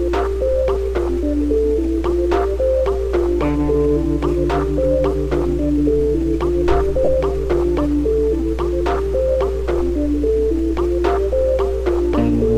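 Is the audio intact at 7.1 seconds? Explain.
No. Lost LE Audio frames cause a dropout from 7.05 to 7.08 s, ending just before 7.1 s. For about 30 ms, which fits roughly four lost Bluetooth frames, the LC3 decoder had no new data. It filled the gap by repeating the last good spectrum with its phases randomised. Over that short stretch, any tonal content turns into a brief hissy smear before normal decoding resumes.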